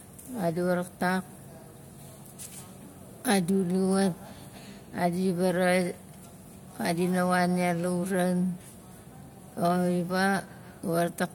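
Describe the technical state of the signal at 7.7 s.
At 7.7 s the speech signal is intact, with no audible fault at that moment.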